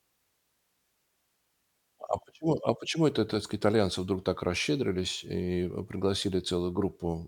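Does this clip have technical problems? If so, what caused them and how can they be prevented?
No, this clip has no technical problems, so there is nothing that caused them and nothing to prevent.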